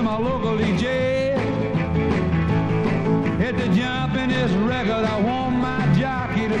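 No faults detected anywhere in the clip.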